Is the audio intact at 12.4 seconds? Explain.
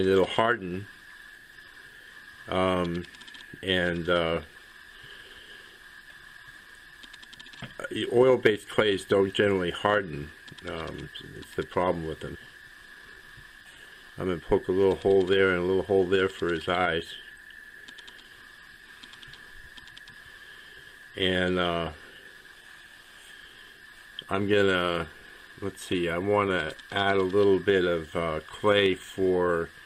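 No. At 12.35 s there is a skip ahead. Roughly a second of audio was dropped, either lost in transit or discarded when the jitter buffer overflowed with later audio already queued. Playback jumps forward with no gap filled in, so the material on either side of the cut is joined almost directly and the listener hears an abrupt discontinuity rather than a pause.

A jitter buffer speed-up follows immediately, from 12.47 s to 14.65 s. After the jump the buffer still held more audio than its target. To work the delay down, the receiver repeatedly cut out short segments one or a few pitch periods long, removing about a third of a second in total. The audio therefore runs at about 114% speed while keeping its pitch, and the stretch sounds noticeably hurried.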